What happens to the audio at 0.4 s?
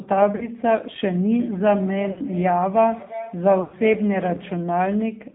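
Right around there, from about 0.36 to 0.48 s, you get lost AMR speech frames. The radio link mangled a short stretch, and the decoder papered over it by repeating its last good pitch and vocal-tract settings at dropping gain. You hear a brief smeared, warbly sag in the speech rather than a clean gap. The missing stretch is about 40 ms, which fits two dropped 20 ms frames, and the speech comes back a bit weak or rough for an instant.

Underneath that, the whole clip runs through the AMR narrowband mobile codec, and the damage is plainly audible. Everything above 4 kHz is gone, so it has that muffled phone-line quality. The speech is rebuilt from a vocal-tract model driven by a few pulses per subframe, giving a buzzy, synthetic edge. That points to one of the lower modes, around 7.4 kbps.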